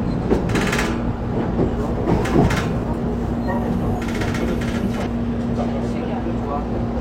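At 5.02 to 5.07 s, damaged data in a compressed stream makes the decoder misread frames and lose sync, producing a brief glitch; spectrograms show a broadband smear, waveforms a discontinuity.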